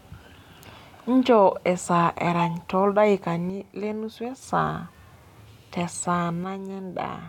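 Speech with two sudden level drops of about 6 dB, from 3.50 to 4.42 s and from 6.44 s to the end. One channel likely drops out each time, halving the mono sum.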